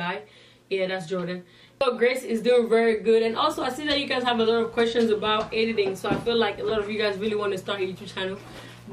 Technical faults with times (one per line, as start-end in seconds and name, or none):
3.22-8.93 mains buzz